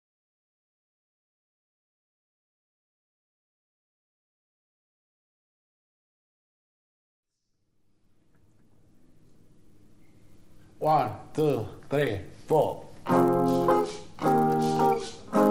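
Resampler restarted on every block, throughout the audio: each 10 ms block was converted in isolation, so every block edge carries an error, giving a 100 Hz buzz that appears only with signal.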